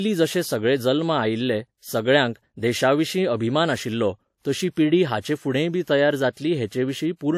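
Throughout the speech, nothing is present above 16.3 kHz and two layers of coding artefacts overlap, likely transcoding between lossy codecs, fitting AAC-LC then WMA at 64 kbit/s.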